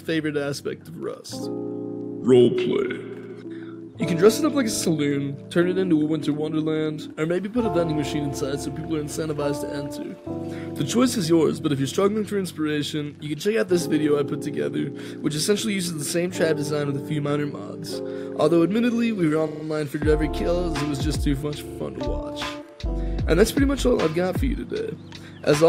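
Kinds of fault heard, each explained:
Repeated frames: a 40 ms block of coded audio replays one to four extra times, a stutter that adds time rather than losing any, unlike a dropout.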